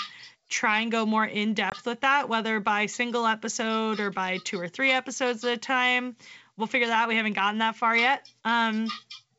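At 1.70 s the speech drops out abruptly, with a hard-edged hole of about 20 ms, consistent with a single lost packet on an ADPCM call. The gap is filled with silence, and the receiver's adaptive predictor and step size no longer match the sender's. As the speech resumes, it comes back with some distortion, then settles by about 1.75 s. The surrounding audio has the clear wideband character of G.722 coding.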